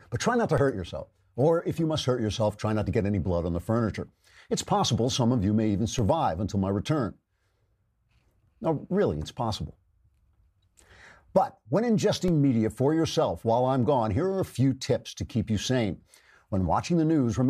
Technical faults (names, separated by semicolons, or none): DC step